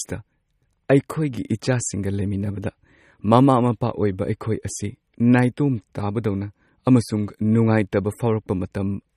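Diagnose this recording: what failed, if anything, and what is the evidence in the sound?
Throughout, the speech sounds watery and swirly, with nothing above 15.1 kHz. The codec stage is the likely cause: MP3 compression starved of bits, consistent with a rate near 35 kbps.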